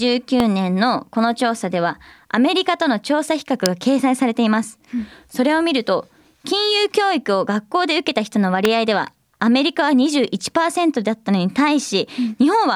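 Three sharp snaps cut through the speech, at 0.40, 3.66 and 8.65 seconds, each over in a few milliseconds. They sit on top of the talking rather than interrupting it, which is the signature of an electrical switching spike: most likely a nearby switch, motor or static discharge arcing briefly and the audio line picking up that burst of interference as a hard click.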